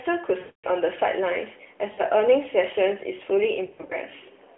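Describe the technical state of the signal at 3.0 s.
At 3.0 s the signal is intact, with no fault present at that moment.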